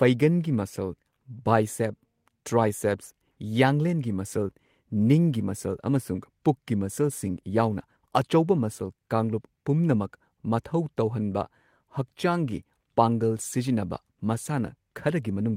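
No technical faults can be heard anywhere in this speech recording. Nothing in it calls for a timestamp or a closer look.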